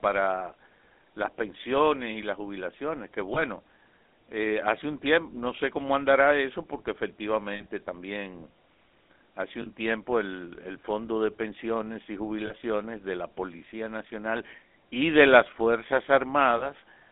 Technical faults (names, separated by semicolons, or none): GSM full-rate codec; lost GSM frames